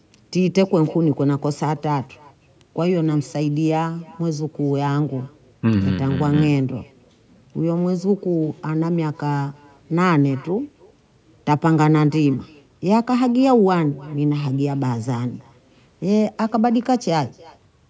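Throughout the speech, an echo with no canceller trails every phrase by about a third of a second: a faint, thin copy about 28 dB down, returned from a far-end loudspeaker into its microphone. Unlike room reverberation, it arrives as a distinct delayed repeat, not a smooth decay.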